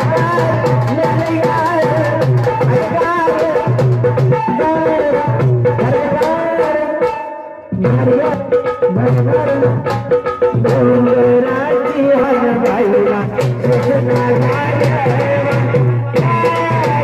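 Compressed frames skipped three times: at 0.54 s, 8.34 s and 12.24 s, the decoder lost or rejected runs of frames, so the sound jumps ahead by about 0.3 s, 0.4 s and 0.3 s, steps that suggest frames near 93 ms long.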